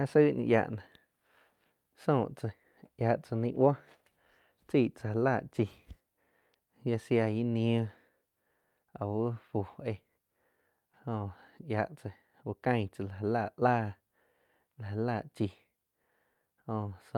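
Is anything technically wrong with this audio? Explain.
No, nothing technically wrong turns up here; the speech comes across without any fault worth pointing to.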